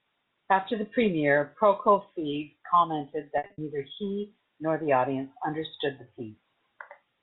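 From 3.38 to 3.58 s, just before "neither he nor the", packet loss with pitch repetition drops about 160 ms of audio in short runs of up to 60 ms, which fits 20 ms packets. The receiver loops the last pitch period, so short gaps sound held and buzzy rather than clicking as plain dropouts would, while the longest run fades out over about 50 ms before speech returns. The G.711 telephone band stays intact.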